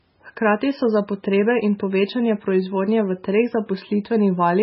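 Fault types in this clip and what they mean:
Low-bitrate audio saved at a high bitrate: likely a very low-bitrate MP3 re-encoded at a far higher rate, so the speech stays dull, with nothing above 5.6 kHz.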